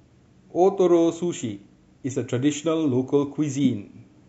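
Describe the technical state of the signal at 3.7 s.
A corrupt frame was decoded from 3.60 to 3.66 s: damaged bits across a few compressed frames were played anyway, throwing energy to wrong frequencies, peaking around -15 dBFS. Throughout, including this moment, the speech sounds watery, with swirly, chirpy sibilants, likely from MP3 compression at a low bitrate around 64 kbps.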